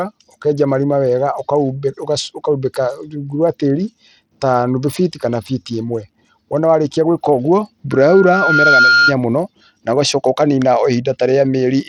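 From the start, the speech carries plainly audible coding damage, most likely Bluetooth SBC compression at a starved bit allocation, consistent with roughly 80 kbps. The sub-band coder leaves the weak upper bands with too few bits, so treble flickers, a gritty noise rides on the sound, and nothing remains above 18.8 kHz.

From 7.91 s to 9.14 s, a loudspeaker feedback squeal appears at 1.4 kHz. The microphone is picking up its own loudspeaker, and at that frequency the loop gain exceeds unity. The tone swells over about a second to roughly 5 dB above the speech, then stops.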